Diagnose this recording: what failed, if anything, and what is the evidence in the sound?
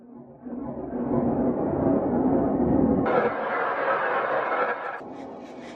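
Sample-format conversion failed: from 3.06 to 5.00 s the audio is read two samples at a time (double speed), an octave higher.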